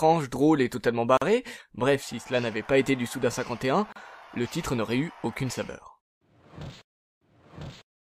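At 1.17 s the sound drops out for about 44 ms, until 1.22 s. At 3.92 s it drops out again for about 34 ms, until 3.96 s. Each is a gap at a join of encoded pieces. The audio was encoded in separate sections and then butted together. The encoder's start-up delay and last-frame padding were never trimmed. Each hole has smeared edges. The sound then resumes exactly where it stopped.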